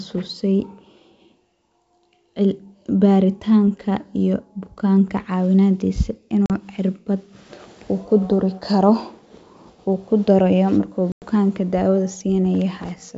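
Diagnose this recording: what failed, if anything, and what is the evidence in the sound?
Packets were lost at the network stage on this G.722 ADPCM call. That left hard-edged silent holes at 6.46 s, after "baritaanka iyo bukaanka cawinadiisa" (40 ms, a couple of packets), and at 11.12 s (100 ms, around five). The decoder's predictor and step size then mistrack, so speech resumes briefly distorted.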